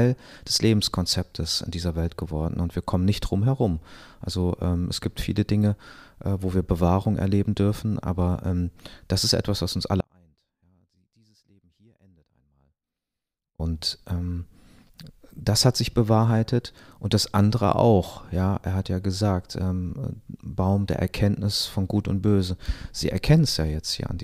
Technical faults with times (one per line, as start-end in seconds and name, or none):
10.01-13.60 audio dropout to a faint residue